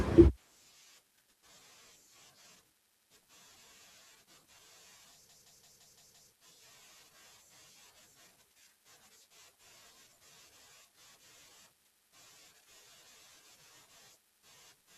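From 5.29 to 6.32 s, a machine-gun stutter repeats one 171 ms slice six times: a system hang loop, with the hardware cycling a frozen ring buffer.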